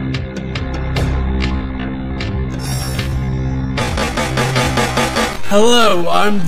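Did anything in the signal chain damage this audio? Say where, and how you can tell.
Yes. From 1.30 s to the end, a time-stretched section plays at 0.52 times the original pace with pitch unchanged, so it drags. A spectrogram shows harmonics drawn out and blurred, with periodic seams where short pieces repeat. The likely cause is software stretching during editing or storage.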